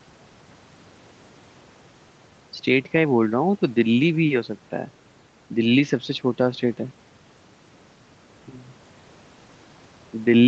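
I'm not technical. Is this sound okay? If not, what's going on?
Yes, it's fine: this is ordinary speech that's been through a normal internet call, so the faint noise of the room in the background and the slightly muffled top end, with nothing above about 8 kHz, are just what calls sound like and nothing's gone wrong.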